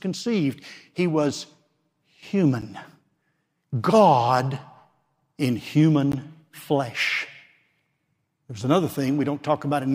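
A speech recording with two brief dropouts: at 2.61 s and again at 6.12 s the sound snaps to dead silence and back, heard as a tick or tiny pop rather than a pause. Each is a block of digital silence, where the samples were zeroed with no fade. The first hole lasts about 10.7 ms, which fits a 512-sample buffer not filled in time. The second is about 15 ms.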